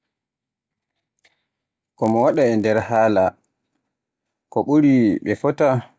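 From 0.0 to 2.98 s the resampler restarted on every block, converting each 20 ms block in isolation and leaving a small error at each edge. The result is a 50 Hz buzz under the speech, seen as vertical spectrogram stripes every 20 ms.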